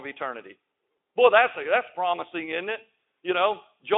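No faults: the speech arrives over a Speex path at 15 kbps, band-limited to roughly 250 Hz to 3.6 kHz with nothing above 3.8 kHz, and shows light codec damage.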